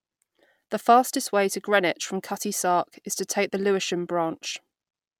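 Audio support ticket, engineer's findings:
No audible fault found in this speech recording.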